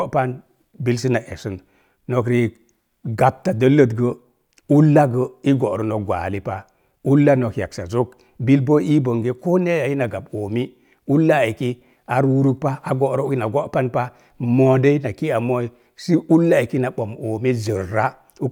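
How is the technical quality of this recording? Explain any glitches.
Nothing in this speech recording stands out as a technical problem, so there are no glitches to explain.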